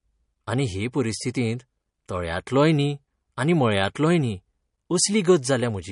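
All the way through, the speech carries plainly audible coding damage, most likely MP3 compression at a low rate, something around 40 kbps. Nothing survives above 10.6 kHz, so the top end sounds dull, and starved frequency lines flicker in and out, giving that watery, swirly texture.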